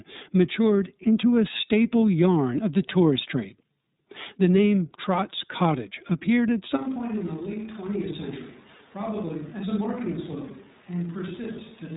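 Throughout this speech recording the sound is band-limited and slightly rough and synthetic, with nothing above 3.8 kHz. That is the iLBC codec at work, coding each frame's excitation independently, and the roughness fits its 13.33 kbps mode with 30 ms frames. From 6.78 s, right after "appeared at", and lasting to the end, the voice suddenly turns roomy and hollow, loses bass, drops roughly 10 dB and picks up background noise around 25 dB below the speech, most likely a switch to a distant microphone after the close one dropped out.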